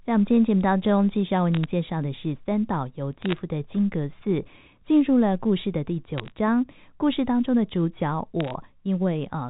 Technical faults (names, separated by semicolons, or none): bit errors on a digital phone line